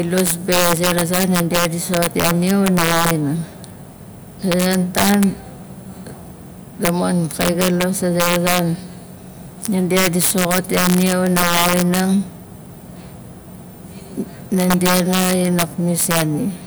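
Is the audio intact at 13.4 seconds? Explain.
Yes, the speech at 13.4 seconds is intact, with no fault at that moment.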